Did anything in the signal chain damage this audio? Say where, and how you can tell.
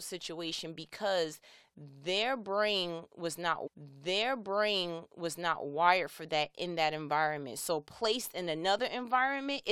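Yes: a stream segment repeated from 3.66 to 5.65 s. The player queued the same two-second chunk twice, so the speech replays after a brief blip at the jump back.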